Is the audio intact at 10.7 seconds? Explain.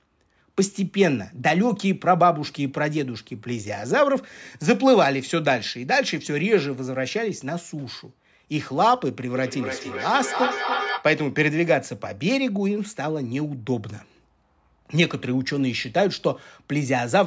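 No. At 10.7 s the audio is inside a stretch of feedback echo between two devices, running from 9.36 s to 11.13 s. Two devices on the same call are in one room. One plays what the other's microphone sent, and that microphone picks it up again. Each echo canceller removes only its own device's playback, so the sound returns roughly every 300 ms, thinner and more ringing, peaking at about 4 dB below the speech.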